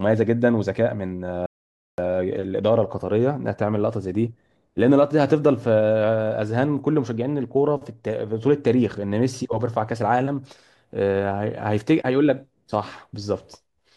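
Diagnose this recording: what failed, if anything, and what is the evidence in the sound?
The input feed to the recorder most likely dropped out for about half a second, from a lost device connection, a failed link or a momentary mute, while the recorder kept writing silence. The result is an audio dropout to silence from 1.46 to 1.98 s: the speech stops abruptly mid-flow and resumes just as abruptly, and the gap is dead silence with no room tone underneath. Roughly 0.52 s of speech is simply missing.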